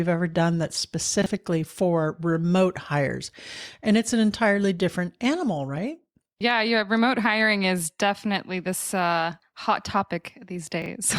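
At 1.22 to 1.26 s, between "ever done that's" and "for remote hires", and again at 10.82 to 10.86 s, two 20 ms chunks of speech play in the wrong order, the earlier one arriving one chunk late. The result is a brief jumbled blip across three hard joins. Unlike a dropout, no audio goes missing and no silent gap opens: the sound is all there, just reshuffled.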